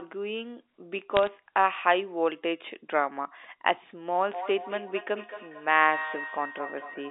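Bit errors on a digital phone line appear from 1.17 to 1.27 s, where a brief burst of sharp ticks breaks over the speech. On a G.711 A-law line each flipped bit corrupts only one 8-bit sample, so a hit on the sign or an upper bit throws that sample far from its true value and produces a click. Here a small fraction of bits, around a third of a percent, were wrong over a short stretch, giving scattered crackle while the underlying speech carries on intact.

Feedback echo between two devices runs from 4.33 s to 7.10 s. The speech returns roughly every fifth of a second, each pass thinner and more ringing than the last, and the strongest repeat sits about 11 dB below the direct speech. This points to two devices in the same room on one call. One device plays what the other's microphone sent, and that microphone picks the sound up again. Each device's echo canceller removes only its own playback, so the loop keeps cycling. 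The rest of the line sounds like narrowband telephone audio, confined to roughly 300 Hz to 3.7 kHz.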